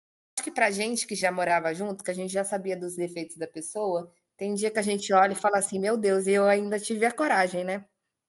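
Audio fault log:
0.00–0.38 s, cut-off start: The speech opens on digital silence, and at 0.38 s it arrives mid-sound, with no natural attack and no gradual rise. Capture or streaming began late, so the opening of the first utterance was never recorded and the audio simply resumes partway through it. Unlike a dropout, the gap sits at the very start rather than interrupting sound on both sides. Unlike a slow fade-in or noise gate opening, nothing ramps up.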